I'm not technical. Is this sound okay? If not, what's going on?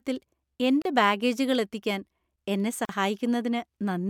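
No. There are two brief silences, a gap at a join of encoded pieces, at 0.82 s just before "ബാഗേജുകൾ എത്തിക്കാൻ എന്നെ" and at 2.85 s just after it. Each lasts about 35–40 ms. The speech was saved in separate pieces and joined without trimming the silent padding the encoder adds at each piece's start and end.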